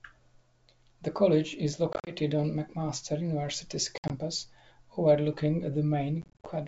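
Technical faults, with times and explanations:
1.93–2.13 s, 3.98–4.11 s and 6.22–6.47 s, packet loss on an ADPCM call: scattered hard-edged silent gaps, up to 60 ms each. Unlike smooth concealment, the sound resumes slightly distorted until the decoder's predictor and step size resynchronise.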